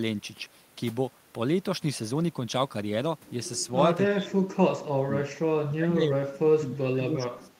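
From 4.1 to 5.26 s and again from 5.66 s to the end, the speech sinks by up to about 30 dB, then 25 dB. That's speech suppressed in double talk, likely an echo canceller ducking everything while both sides talked.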